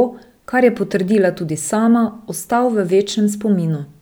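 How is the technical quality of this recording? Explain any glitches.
No glitches can be heard in this recording. Nothing interrupts or alters the sound at any point, so there is no fault to account for.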